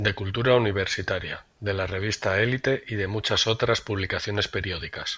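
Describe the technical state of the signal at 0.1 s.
At 0.1 s the speech signal is intact, with no audible fault at that point.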